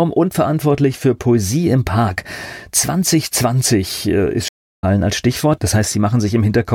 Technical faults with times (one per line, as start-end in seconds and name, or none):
4.48-4.84 stream reconnect